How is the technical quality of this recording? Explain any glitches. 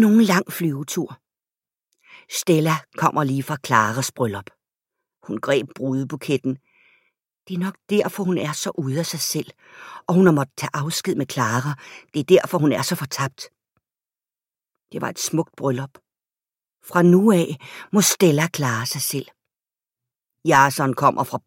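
Nothing stood out on listening to this speech recording, and there are no glitches to explain.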